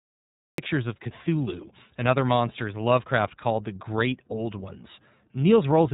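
A speech recording passed through the iLBC codec, a narrowband VoIP coder that handles each 30 ms frame on its own, with no help from the frame before. The texture fits its 13.3 kbps, 30 ms mode. Everything above about 3.8 kHz is gone, so the voice sounds boxed-in and telephone-like. The codec damage is plainly audible throughout as a rough, slightly synthetic grain. There is also a cut-off start: the stream began late, giving digital silence from 0 to 0.58 s. The sound then appears abruptly at 0.58 s, partway into the speech, with no natural onset.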